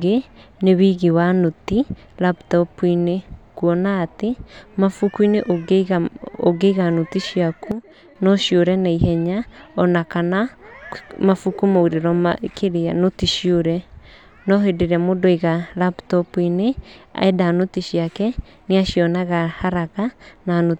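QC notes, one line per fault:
7.72–8.16 s, sudden gain jump: the speech and its background noise drop together by about 10 dB in a single step, hold at that lower level for roughly 0.44 s, then snap back up just as abruptly at 8.16 s. Because the floor falls and rises in lockstep with the speech, this is a level change applied to the whole signal, not a quieter passage. The likely cause is a digital gain setting switched between adjacent samples with no ramp.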